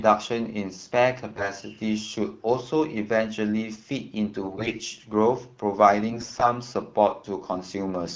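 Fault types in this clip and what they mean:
AMR bit errors: damaged frames still decode, placing the excitation pulses wrongly and skewing gain and spectrum. The speech turns hoarse and gargly at 1.36–1.50, 4.41–4.80 and 6.09–6.50 s but keeps its pitch and level, unlike lost frames, which leave gaps or smeared repeats.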